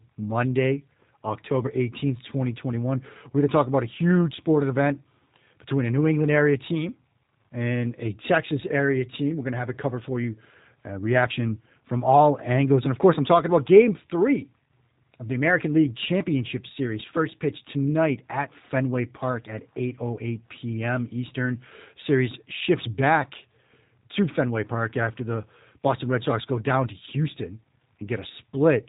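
Across the whole recording the speech has passed through a G.729 codec, a low-rate telephony coder that discards the actual waveform and rebuilds each short frame from a vocal tract filter, a pitch predictor and a handful of pulses. The result is plainly audible: everything above 3.8 kHz is gone, leaving a narrow, muffled telephone band, and the voice has a rough, slightly synthetic buzz that fits a coder running at around 8 kbit/s.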